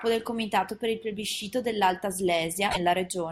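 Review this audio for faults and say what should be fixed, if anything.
Damaged data in the compressed stream causes a brief glitch from 2.68 to 2.77 s in this speech. The decoder hit corrupted frames, lost sync and hunted for the next valid header. Prevent it by verifying file integrity or checksums before decoding.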